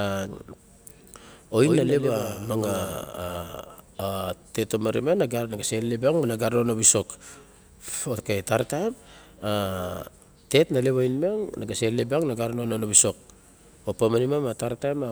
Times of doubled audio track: 1.63-3.37

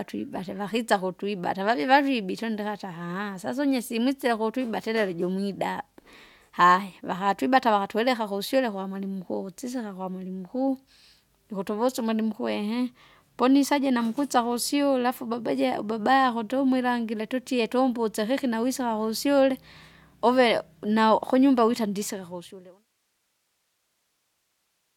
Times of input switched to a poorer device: none

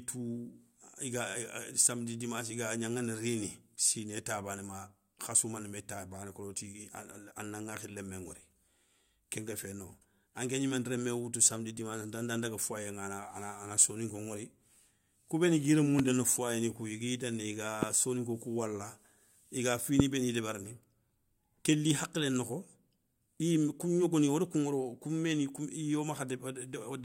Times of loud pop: 15.99-16.01, 17.83-17.85, 20.00-20.02

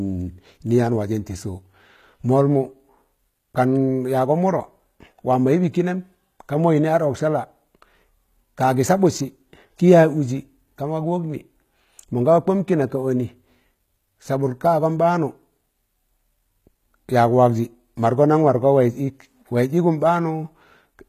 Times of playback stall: none

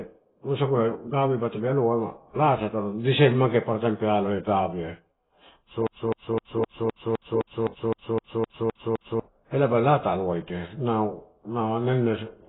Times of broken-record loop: 5.87-9.20

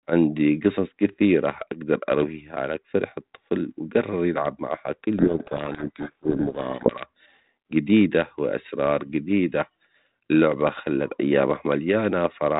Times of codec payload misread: 5.19-7.06

